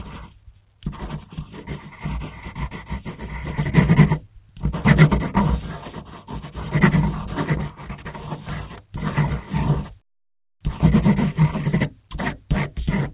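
Nothing's actually wrong with these sounds; they've just come over a call path that stops at about 4 kHz, which fits a narrowband telephone codec such as G.711 A-law running at 64 kbps.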